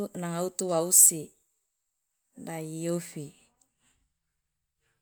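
Nothing technical stands out in this short bit of speech; there's no fault to point to anywhere in it.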